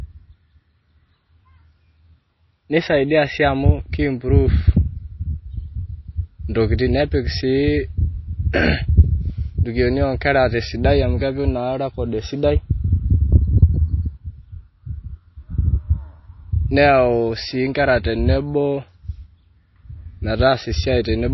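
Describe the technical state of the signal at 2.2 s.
At 2.2 s, as throughout the speech, the treble stops dead above 5.8 kHz and the sound is watery and swirly. That points to MP3 compression at a low bitrate, around 24 kbps. The encoder likely ran short of bits, cut the top and zeroed weak frequency lines frame by frame. A plain low-pass filter would dull the sound without this flickering swirl.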